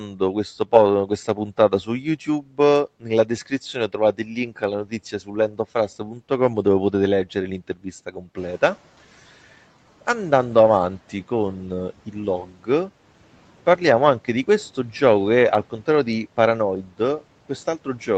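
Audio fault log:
0.03–0.21 s, 1.07–2.59 s, 3.0–5.59 s, 5.99–6.2 s, 7.84–8.37 s, 12.06–12.68 s: speech cut by the noise suppressor. The suppressor mistakes quiet parts of the speech for background. Short stretches, roughly 150 to 500 milliseconds in each range, dip by about 7 to 13 dB, so soft consonants, word endings or quiet phrases sound swallowed and faint.
8.37–8.77 s: noise suppressor catching up. The room noise jumps by about 11 dB near 8.5 s. The suppressor's noise estimate lags, so the noise first comes through louder. Over 400 ms the estimate adapts and the noise sinks by about 10 dB.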